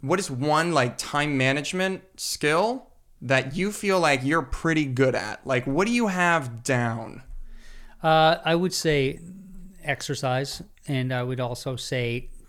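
From the start to 8.74 s the speech carries channel delay (comb filtering): one channel lags by roughly a single sample, about 0.02 ms, and the mono sum cancels near 20 kHz, so the top end sounds dull.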